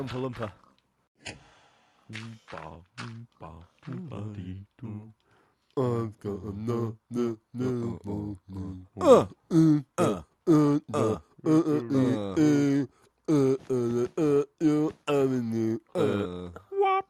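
No technical faults can be heard anywhere in the audio. Nothing in it breaks, drops out or distorts at any point.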